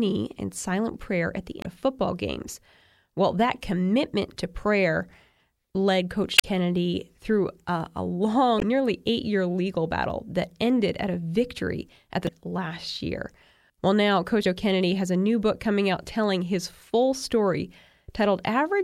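Damaged data in a compressed stream recurs through this speech: corrupted stretches make the decoder misread frames, lose sync and hunt for the next valid header, leaving brief glitches. It strikes at 1.61 to 1.66 s between "silent prayer at the" and "of football games", at 6.35 to 6.45 s, at 8.58 to 8.63 s after "through a a" before "nearly eight year legal", at 12.24 to 12.29 s before "last year", and at 14.41 to 14.45 s.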